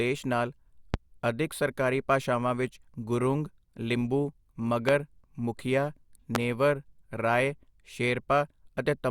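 Speech, interrupted by three loud pops at 0.94 s, 4.89 s and 6.35 s. Each is a single sharp thump lasting about 30 ms. It peaks roughly 20 dB above the speech, which continues underneath. A likely cause is a voltage spike from a plug, switch, static or driver glitch.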